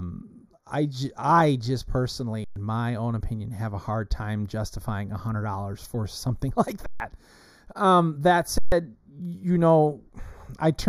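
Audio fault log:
Throughout: channel delay (comb filtering). One channel arrives roughly a fifth of a millisecond late and is summed to mono, so shared content cancels in evenly spaced notches starting near 3 kHz, leaving the speech hollow and phasey with a dulled upper range.
2.44–2.56 s, 6.86–7.00 s, 8.58–8.72 s: underrun with held sample. The output buffer emptied for 120, 140 and 138 ms. The converter froze on its last value, so the speech stops dead without a click. Roughly 100 to 150 ms of live audio was skipped each time.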